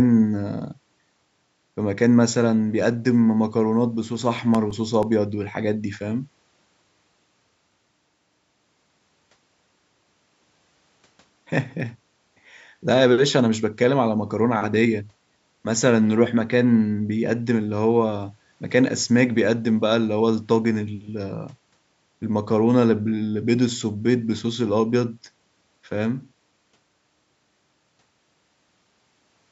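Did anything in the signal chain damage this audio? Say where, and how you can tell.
Yes. CD scratch ticks appear in this speech at the playback stage, in two bursts: 4.22 to 5.19 s (seven ticks, the longest a few milliseconds) and 11.80 to 12.93 s (eight ticks, each under about two milliseconds). A blemish overwhelms error correction once per disc revolution, so the player interpolates or mutes samples, leaving regular ticks of uneven strength. The call microphone processing's bass roll-off and the band ending near 8 kHz are normal.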